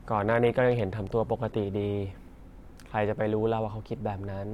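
From 0.0 to 2.0 s the adaptive stream is starting at a low bitrate: sound is dull and smeared, suggesting a roughly 48 kbit/s AAC encode, with nothing above 16.6 kHz. At 2.0 s quality jumps without a gap, and the spectrogram's empty top band suddenly fills.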